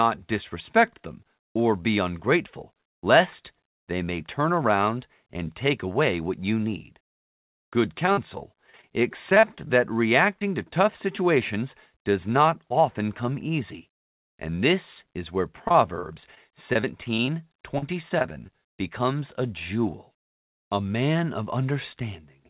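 Speech carried over a narrowband call path, with nothing above 4 kHz, which fits G.711 mu-law at 64 kbps. Repeated packet loss (robotic sound) occurs at 8.06–8.84 s, 9.30–9.70 s, 15.68–16.37 s (after "this is where") and 16.73–18.49 s (before "becomes a jewel"). Gaps of up to 49 ms are patched by extending the previous sound, leaving a choppy texture. A short concealed packet loss at 10.39–10.42 s, just before "to tough situations does", fills about 20 ms of missing audio with a continuation of the preceding sound, heard as a brief smear.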